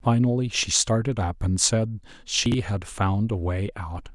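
At 2.46 to 2.54 s there's chunks out of order: one 20 ms slice lands three chunks late, so the speech briefly jumbles across three hard joins.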